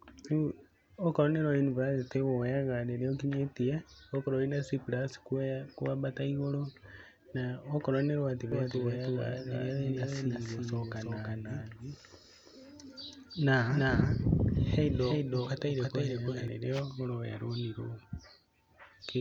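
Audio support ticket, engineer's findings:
Doubled audio track, 8.52 to 16.48 s, starting just after "na okorwo nĩ rwa". Full-band copy of the speech trails about 300 ms behind, about 5 dB down. Likely a second, slower capture path or misaligned edit. Unlike room echo: no decay, no colouring, abrupt onset and cutoff.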